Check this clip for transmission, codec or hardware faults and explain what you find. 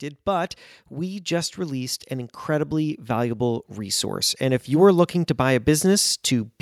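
There is one fault. From 0.25 to 6.56 s, automatic gain rising: the gain control, finding the input too quiet, climbs about 11 dB, so speech and background swell together.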